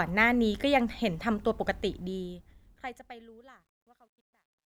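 A volume stage carrying the fade-out keeps too few bits and adds no dither, producing truncation distortion on a fade from 1.89 s to the end at 4.73 s. As the level drops, the speech collapses onto coarse amplitude steps, consistent with roughly 12-bit resolution. From 3.25 s to 4.73 s the quiet tail turns gritty and granular.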